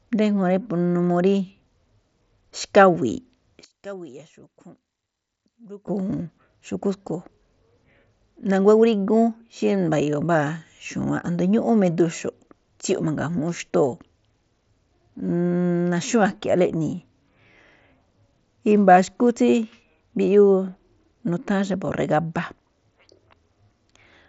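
From 3.64 to 5.87 s the speech drops by about 20 dB to a faint copy, likely from one channel inverted so the shared centre cancels in the mono sum. The waveform shrinks sharply there.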